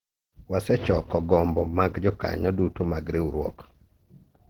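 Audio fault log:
Throughout, Opus compression: likely a low bitrate near 16 kbps in hybrid mode, so the speech sounds plainly hoarse despite full bandwidth.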